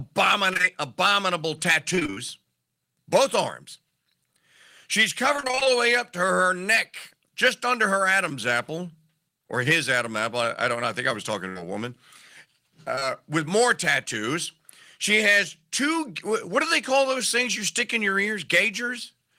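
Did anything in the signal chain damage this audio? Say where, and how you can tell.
Yes, the network stage damaged this speech. Short concealed packet loss appears at 0.53, 0.57 and 0.61 s, then at 12.95 and 12.99 s just before "with more tattoos". Each hole is about 20 ms, filled by extending the preceding sound, so it leaves a brief smear or wobble. Isolated, it doesn't chop like the robotic stretches.

Repeated packet loss (robotic sound) runs from 1.95 to 2.18 s and from 5.36 to 5.67 s, ending just before "the way up to". Gaps of up to about 29 ms recur so quickly that nearly half of each span is patched, which gives a choppy texture.

A burst of packet loss at 11.49 to 11.57 s falls between "think I was talking" and "a woman". About 60 ms vanishes in one run, and concealment holds the last sound and fades it. That produces a single sustained buzz or fading hiss, not a string of ticks.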